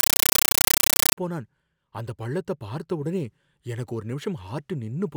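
From 0.0 to 1.17 s, very loud, chattering static replaces the speech. This is a compressed stream played as audio. Undecoded AC-3 data is output as ordinary samples. Noise bursts of 9.33 ms repeat 31.25 times a second, fitting a 448 kbps stream.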